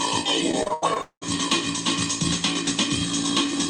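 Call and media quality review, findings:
Repeated packet loss (robotic sound), 0.51–1.23 s. Network path dropping or delaying packets: six gaps, longest 199 ms. Concealment extends last audio across each hole, so about half the span is synthetic. Result: choppy, robotic sound with pieces missing.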